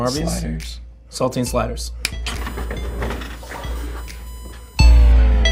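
At 2.38 s a steady whine comes in and stays until 5.12 s. That's USB whine, a fixed tone sitting right at 1 kHz, which is the strongest component. The USB bus pulls current in 1 ms frames, and that rhythmic draw is getting into the audio through the power or ground wiring, so you hear the frame rate as a pitch. It sits roughly 30 dB under the audio.

While the whine is already running, there's a short burst of DAB burbling from 2.99 to 3.05 s. In about 60 ms the sound burbles as individual frequency bands get short noise blips. Weak reception let a small number of bit errors slip past the error correction into the MP2 data, so wrong samples got decoded. The length fits a handful of MP2 frames.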